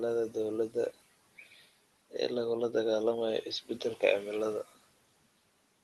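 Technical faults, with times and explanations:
1.23–4.52 s: input switched to a poorer device. The sound turns duller and shifts a few dB in level with no gap, and the top of the band narrows, likely from a narrower-band microphone taking over. Unlike a codec band limit, which reaches 12 kHz elsewhere, it reverts after 4.52 s.
1.45–1.63 s: speech cut by the noise suppressor. For roughly a tenth of a second, parts of the speech sink by up to about 8 dB and sound swallowed, as the suppressor mistook them for background. It is a brief dip in loudness, not the lasting change of tone from the device switch.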